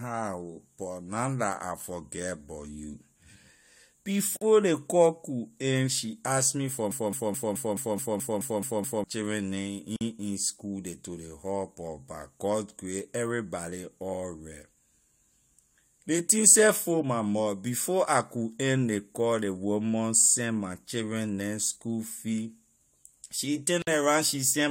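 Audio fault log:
4.37–4.41 s, gap at a join of encoded pieces: two separately encoded pieces were butted together without trimming the encoder's start-up delay and final-frame padding, so a silence of about 48 ms cuts into continuous speech with smeared edges before it resumes where it stopped.
6.91–9.04 s, broken-record loop: the stream most likely stalled and kept resending the last fragment it held, so a 214 ms slice of speech repeats exactly ten times back to back, and whatever should have played in those two seconds is lost.
9.96–10.01 s, gap at a join of encoded pieces: at another untrimmed join, leftover encoder delay and padding leave a silence of about 47 ms. It breaks the speech abruptly, with codec-softened edges, and the sound carries straight on afterward.
23.82–23.87 s, gap at a join of encoded pieces: a third join keeps its padded last frame and start-up silence, opening a hole of about 52 ms in continuous speech. 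Its edges are abrupt but blurred, and the speech continues from where it stopped.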